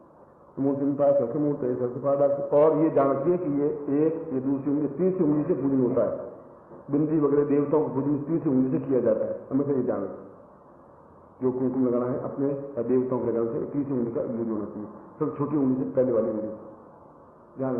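Nothing stood out on listening, and the sound shows the top end easing off near 12 kHz, which fits an Opus call path running at around 40 kbps.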